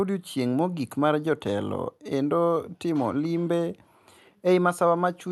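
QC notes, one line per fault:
No faults are heard in this speech clip. It has come through a WebRTC call path, and the high end stops at about 12 kHz, which fits an Opus stream at around 64 kbps.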